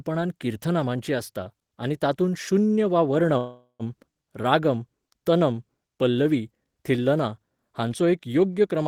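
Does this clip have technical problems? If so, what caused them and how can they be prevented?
Yes. A call audio freeze runs from 3.37 to 3.83 s, between "आनी तातूंत शून्य वा" and "रागम तनम पल्लवी थिल्लना". The last sound stretches into a fading buzz, then 100 ms of silence, and speech resumes with nothing lost. Delayed packets likely drained the jitter buffer. A steadier network path or a deeper adaptive jitter buffer prevents it.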